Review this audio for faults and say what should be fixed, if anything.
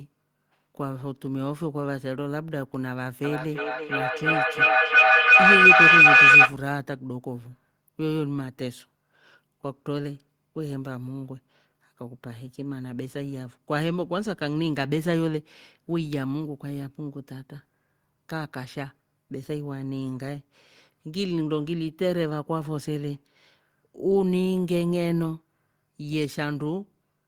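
A piercing tone around 3 kHz swells from 3.24 s to 6.59 s, pulsing roughly every 300 ms and peaking about 13 dB above the speech. This is feedback howl: two devices in one room share the call, and each microphone-to-loudspeaker round trip adds gain. Keep only one device unmuted per room, or use headphones.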